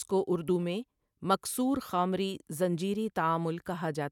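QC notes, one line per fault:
0.44–1.01 s, CD scratch ticks: four short ticks, each around a millisecond at most, in a regular once-per-revolution rhythm, ending just before "مکـثـورخامری زنجیری". A blemish wipes out more data than error correction can rebuild, so the player patches or mutes those samples.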